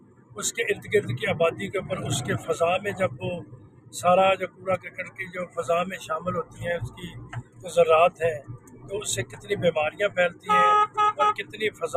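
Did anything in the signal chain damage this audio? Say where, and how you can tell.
Yes. At the call-processing stage, a noise suppressor was applied to music or sounds it was never designed for. It treats sustained content and decays as noise, so gain swings of around 20 dB make the audio pump and thin while transients pass.

Sound cut by the noise suppressor is audible at 0.00–0.38, 3.42–3.96, 4.48–5.61, 6.44–7.65, 8.11–8.91, 9.25–9.51, 9.91–10.48 and 11.40–11.97 s. Steady or fading passages drop by about 11 to 14 dB.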